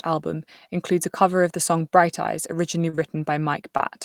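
A short speech recording with three packet-delivery faults near its end. Right after "song bright eyes originally", at 2.89 to 2.95 s, there is a short stall from a late packet. The jitter buffer ran dry, so the receiver held the last sound for about 37 ms until the packet arrived and then resumed from the same point. No audio is lost, but the syllable is stretched, and everything after it plays 37 ms later than before. Directly after this, at 2.95 to 2.99 s, comes a short concealed packet loss. About 20 ms of audio never reached the decoder in time, and the receiver covered the hole with 22 ms of synthesised continuation of the preceding sound before blending back into real audio. This produces a brief smear that sounds joined to the stall. A second concealed loss occurs at 3.77 to 3.81 s, where another 20 ms is missing and is patched with 19 ms of extrapolated sound, heard as a short smear or wobble.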